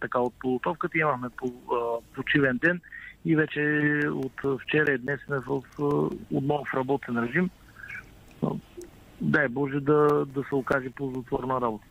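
From 3.81 to 6.33 s there's a run of CD scratch ticks, about five a second, each a short click or dropout of uneven strength, the longest around 10 ms. The same pattern returns from 9.88 to 11.36 s. That's a blemish wiping out more data than error correction can rebuild on each disc turn, so the player patches or mutes it.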